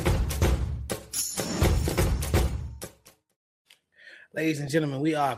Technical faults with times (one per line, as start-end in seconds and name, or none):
1.27 DAB burbling
4.67 DAB burbling